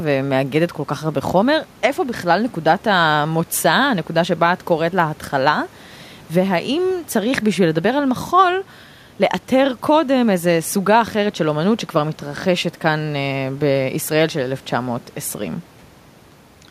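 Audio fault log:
No technical faults found.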